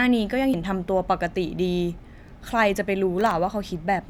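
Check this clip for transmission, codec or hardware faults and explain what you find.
Two faults are audible in this speech.

From 0.54 to 0.63 s, compressed frames skipped: frames of the encoded stream were lost or rejected by the decoder, so playback jumps ahead by roughly a tenth of a second.

From 3.18 to 3.31 s, processor overload crackle: the processor repeatedly missed its deadlines for very short buffers, well under a millisecond each, and a handful of them came out as silence. These tiny hard-edged gaps add up to a brief gritty crackle over the voice.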